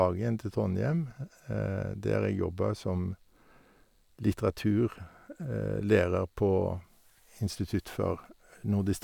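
Listening closely to the speech, nothing stood out as a technical fault at any point.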